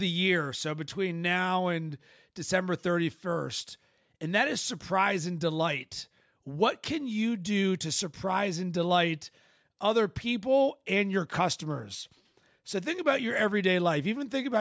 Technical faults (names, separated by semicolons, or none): none